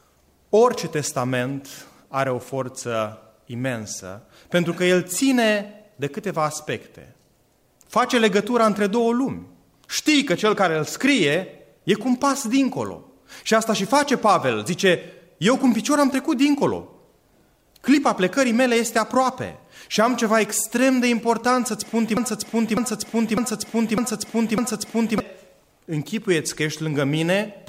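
At 22.17 s a 0.60 s fragment repeats exactly five times until 25.2 s, a broken-record loop; the stream likely stalled and replayed its last buffer.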